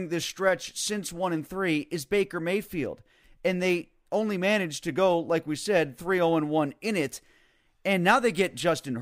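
Speech recording with no audible technical faults.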